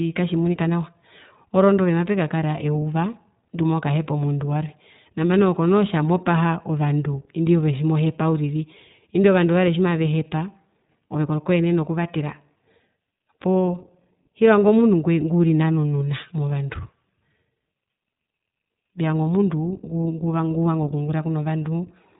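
Right through the speech you can hear the iLBC codec: nothing above 3.8 kHz survives, and the plainly audible coding damage leaves it slightly rough and synthetic, consistent with roughly 15 kbps in 20 ms frames.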